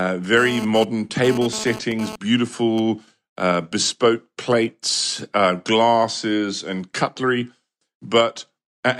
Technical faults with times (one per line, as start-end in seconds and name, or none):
0.37-2.79 GSM phone buzz